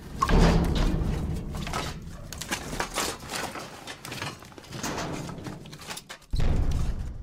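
Nothing goes wrong anywhere in this one; there's not a single dropout, glitch or hiccup to point to.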